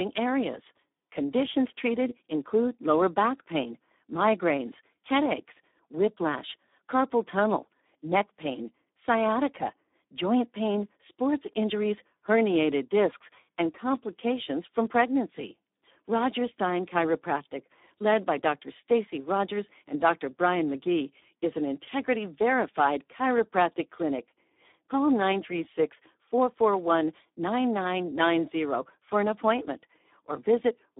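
From start to finish the speech sounds hoarse, buzzy and partly robotic, squeezed into a narrow band of about 250 Hz to 3.7 kHz with nothing above 3.8 kHz. This is heavy Speex codec damage: too few bits for the excitation, which fits about 8 kbps.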